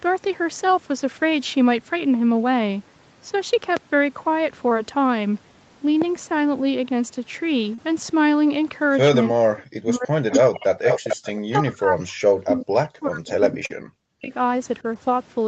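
At 3.77 to 3.79 s a single loud pop rises about 15 dB above the speech, and a second, about 10 dB above it, follows at 6.02 to 6.04 s. Each is a brief electrical pulse added on top of the signal, likely from a switch, static or a driver glitch. The speech carries on unbroken underneath, which separates a pop from a gap or a concealment tick.

Short concealed packet loss occurs at 4.69 to 4.73 s, where 20 ms of audio failed to arrive and about 12 ms was synthesised to cover it. It recurs at 7.75 to 7.80 s, with 40 ms lost and 31 ms filled. The receiver extended the preceding sound and then blended back, so these moments come across as a tiny smear or wobble rather than a sharp click. The speech itself changes briefly, instead of having something laid over it.

From 9.30 to 10.94 s the speech is suppressed in double talk, dipping by as much as about 40 dB. The echo canceller, likely unable to distinguish the near talker from loudspeaker echo while both sides were speaking, turned the signal down. 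The level drops and breaks up in pieces over more than a second, unlike the hundredth-scale glitches of packet loss.

Inside that stretch, at 10.31 to 10.40 s, an echo leak lets a faint copy of the speech through, about 10 dB below it and delayed by 407 ms. A louder leak, at about the same level as the speech, follows at 10.86 to 11.32 s, likely where the far side's canceller left loudspeaker pickup in its microphone signal. The fixed 407 ms delay marks it as returned echo rather than room reverberation, which would trail straight off the original sound.

Suppression sets in again from 11.35 to 14.32 s, again dropping by about 40 dB and affecting some 3 s in total. A further packet-loss concealment, with 40 ms missing and all of it filled, falls within it at 13.66 to 13.72 s. Throughout, the call path limits the audio to about 8 kHz.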